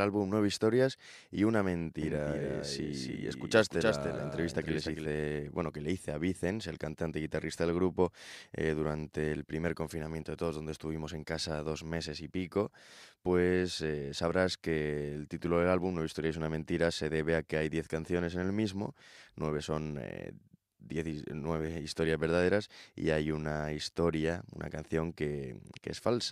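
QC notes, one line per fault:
2.02–5.06 s, doubled audio track: between "y una" and "bueno que le hice" the speech is heard twice, a second full-band copy trailing the first by about a third of a second and quieter, around 5 dB down. It carries no reverberant tail or room colouring, and it switches in and out abruptly at both edges. This is likely the same signal mixed in again through a slower capture path, or an edit holding two misaligned copies.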